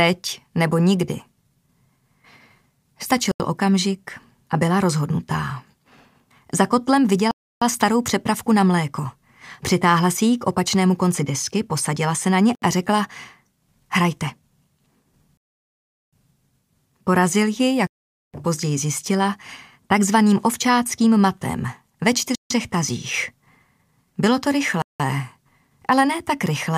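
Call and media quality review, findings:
Bluetooth stall, seven dropouts: 3.32–3.40 s, 7.31–7.62 s, 12.55–12.62 s, 15.37–16.13 s, 17.87–18.34 s, 22.35–22.50 s, 24.82–25.00 s. Hard cuts to silence, 71 to 753 ms, longest at 15.37 s, then the audio resumes. Likely radio interference on the wireless link delaying packets, so the headphone buffer emptied and playback halted until retransmitted packets arrived. Check the wireless link and the receiving buffer.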